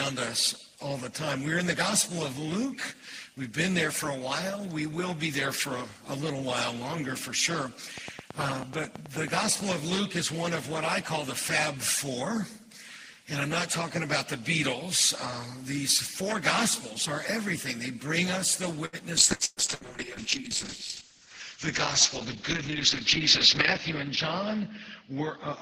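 From 7.98 to 9.72 s a train of clicks ticks regularly, about 9.2 per second, around fifteen in all, peaking about 10 dB above the sound. This is likely interference, and the even spacing and identical shape set it apart from one-off packet glitches.

At 18.85 to 18.96 s a short stall from a late packet holds the last sound for 74 ms. The audio then resumes exactly where it left off, with nothing missing, which distinguishes it from loss.

From 19.19 s to the end, a call bitrate drop from 32 to 7 kbps narrows the bandwidth from 20 kHz to 8 kHz. The sound turns muffled and watery, staying at its lowest for 4.58 s. Unlike the brief gaps, this steady dulling persists.

Within that stretch, short concealed packet loss at 19.35 to 19.42 s smears 43 ms over 60 ms of missing audio, a brief wobble rather than an audible gap.

Bursts of packet loss follow at 19.45 to 19.60 s and 19.75 to 19.84 s, losing 120 ms and 60 ms. 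Each plays as a fading held buzz or hiss, the first with about 10 ms of silence, before the audio jumps ahead.

From 21.01 to 21.56 s a jitter buffer speed-up plays the sound about 6% fast, removing about 40 ms. It sounds hurried without any change in pitch, which is what separates it from a simple playback speed error.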